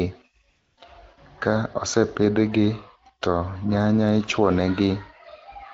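From 0.49 to 0.77 s, AMR comfort noise fills a 280 ms pause where no speech frames were sent. The real background gives way to a smooth, steady hiss, which shows on a spectrogram as a flat, featureless noise band with abrupt edges.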